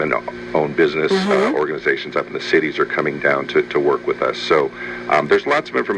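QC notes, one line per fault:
No faults heard in the clip.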